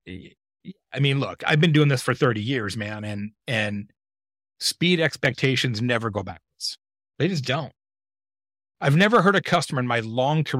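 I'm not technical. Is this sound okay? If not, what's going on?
No, not quite. The speech breaks into a harsh, crackly fuzz three times. That is hard clipping. The recording was pushed louder than the equipment could handle, so the tops of the loudest sounds got sliced off flat. Those flattened peaks add a gritty, buzzy edge. It happens from 1.48 to 2.24 seconds, just before "years man and and". It comes back from 5.06 to 5.45 seconds and from 8.88 to 9.57 seconds.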